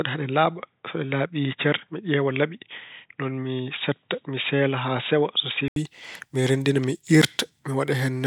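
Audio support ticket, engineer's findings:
Speech, 0.0–5.76 s: dull, boxy band with nothing above 3.8 kHz, level about 5 dB low, faint separate hiss far below the speech. Clears abruptly after an 80 ms silence at 5.76 s, before "mi renndina mi". Likely input switched to a poorer device, then back. Differs from a plain bandwidth cap: tone, level and noise floor all change together, with a gap at the switch.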